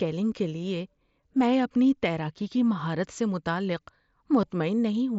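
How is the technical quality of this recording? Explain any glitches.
There is one brief glitch, carried over a Bluetooth headset link using the mSBC wideband codec. That codec limits the audio to 8 kHz and adds a light grainy texture on louder passages.

At 4.42 s, just after "کی مہارت سے متعلق", there is concealed Bluetooth headset packet loss. A gap of about 7.5 ms, which fits a single lost frame, was filled by the receiver. It repeated the best-matching stretch of the preceding waveform. Because the loss is isolated and short, the patch is nearly hidden rather than heard as a buzz.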